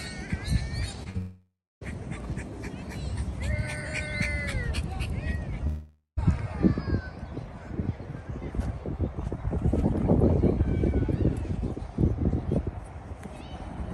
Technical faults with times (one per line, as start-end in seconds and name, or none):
1.03-1.07 short concealed packet loss
1.09-1.16 burst of packet loss
1.18-1.83 long network dropout
5.67-6.33 long network dropout